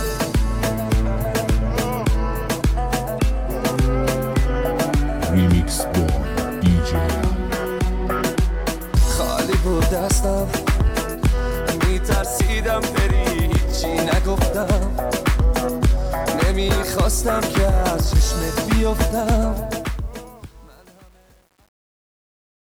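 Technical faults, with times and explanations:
19.53–22.63 s, truncation distortion on a fade: the fade-out, which starts around 19.5 s, is processed without dither at too few bits, consistent with an 8-bit stage. The shrinking waveform collapses into coarse square steps, so from 20.02 s the tail turns gritty.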